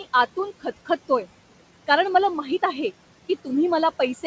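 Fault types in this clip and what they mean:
Noise suppressor artifacts: present throughout the speech. The room noise, which sits about 18 dB below the talker, drops by about 17 dB in the pauses and returns underneath whenever speech resumes. The suppressor judges frame by frame which frequency bands carry only steady background and turns those down, so the noise floor pumps in step with the talking instead of holding level, within a band that ends at 8 kHz.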